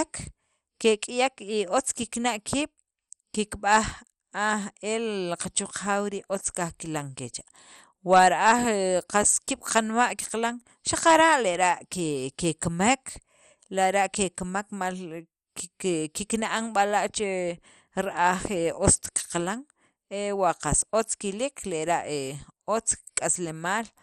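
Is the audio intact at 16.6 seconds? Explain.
No. At 16.6 s the speech carries the dull, gurgling, granular texture of MP2 compression, present throughout the clip and likely the cause. With too few bits, upper sub-bands flicker off and the rest are coarsely quantised, fitting roughly 64 kbps, with nothing above 15.5 kHz. A plain low-pass filter would sound clean rather than grainy.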